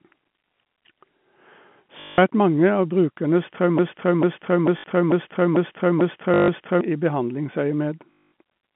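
At 2.0 to 2.18 s, packet loss with the last packet repeated causes a brief robotic stutter. A buzz near 50 Hz fits 20 ms packets.

From 3.79 to 6.81 s, a broken-record loop replays one 0.44 s fragment seven times, likely from a stalled player or stream. Its longer, exactly repeating piece sets it apart from the rapid buzz of the stutters.

Inside the loop, the packet-repeat stutter returns at 4.78 to 4.84 s and 6.34 to 6.48 s, and again after it at 8.13 to 8.31 s.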